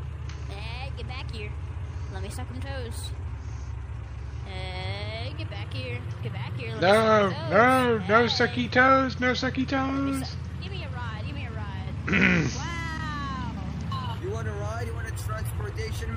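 MP3 compression runs through the whole clip, plainly audible from start to end. Weak detail flickers between frames, giving a watery, swirly texture, metallic chirps on bright sounds and smeared attacks, most likely from encoding at a low bitrate around 64 kbps.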